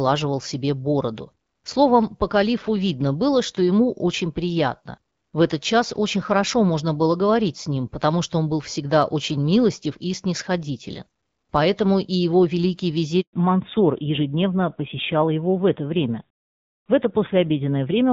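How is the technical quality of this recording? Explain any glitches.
The quality drops partway through, when the call briefly cuts out and then continues in a narrower band. Before that, the HD Voice wideband codec shows only light coding damage, consistent with a rate around 12.65 kbit/s.

At 13.21 s, right after "и его великий", there is a handover gap. The call switched networks and no speech frames arrived, so the sound fades quickly and stays silent for 120 ms, until 13.33 s.

From 13.33 s to the end, there is a fallback to narrowband. The link dropped from wideband to an older narrowband codec, and everything above 4 kHz disappears. The speech sounds duller and rougher, which fits a rate around 7.4 kbit/s.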